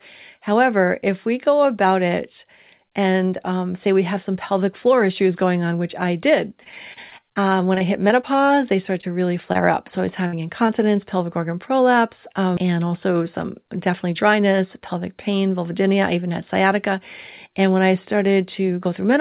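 Repeated packet loss (robotic sound) runs from 6.64 to 8.51 s, between "on which I did" and "they started to really". Over a dozen short gaps, the longest about 27 ms, were patched by extending the preceding sound. Because the patches follow each other so closely, the stretch sounds choppy and robotic, with about 160 ms of real audio missing.

Short concealed packet loss comes at 9.01 to 9.05 s, between "they started" and "to really", and again at 9.53 to 9.57 s. In each case roughly 20 ms never arrived in time. The decoder bridged the hole by continuing the last sound and then blending back, which leaves a brief smear or wobble.

A burst of packet loss at 10.27 to 10.35 s removes about 60 ms in one run. The receiver stretched the last sound across the gap while fading it, so a short held buzz or fading hiss stands in for the missing stretch before the audio picks up further on.

A final short concealed packet loss at 10.67 to 10.70 s, just before "pelvic organ prolapse um", fills another 20 ms hole with a quick smear. 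Throughout the clip there is nothing above 4 kHz, which fits a narrowband G.711 call path.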